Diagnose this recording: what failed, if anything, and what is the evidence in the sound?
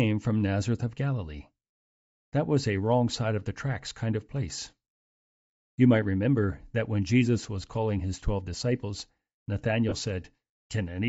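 The codec stage is the problem across the whole recording. The speech has a breathy, grainy edge and the top end sounds hollowed out and hissy instead of detailed, and it's plainly audible the entire time. That's likely Bluetooth LC3 compression: at a low rate the encoder throws away much of the upper spectrum and the decoder fills those bands with noise. The damage fits a budget around 32 kbps with 10 ms frames.

The second fault is in the radio link. There are two short dropouts of lost LE Audio frames, one from 1.65 to 1.70 s (50 ms) and one from 9.89 to 9.94 s (30 ms). The sound turns into a brief noisy smear, because the LC3 decoder keeps replaying the last good spectrum with randomised signs and fades it as the gap goes on. The lengths match about five and three missing 10 ms frames.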